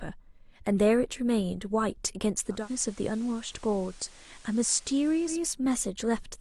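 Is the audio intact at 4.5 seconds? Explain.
No. From 2.49 to 5.45 s the receiver shows digital radio blending to analogue, cross-fading over 204 ms to the FM broadcast: level about 2 dB lower, steady hiss. That hiss distinguishes it from a bandwidth-reducing codec switch.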